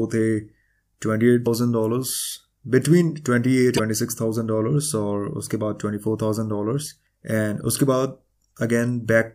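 Damaged data in a compressed stream interrupts this speech clip twice, at 1.43 to 1.47 s and 3.75 to 3.80 s, each about 40 ms long. Corrupted bytes there make the decoder misread its frames, lose sync and hunt for the next frame header.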